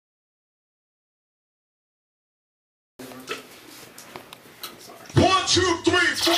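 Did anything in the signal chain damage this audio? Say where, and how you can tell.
Yes. A click recurs every 1.52 s between 0.17 s and 6.24 s, about five times. That steady spacing marks clock drift buffer slips at the buffer stage. Two devices likely run on separate clocks, roughly 200 ppm apart, so about fifteen samples slip each time.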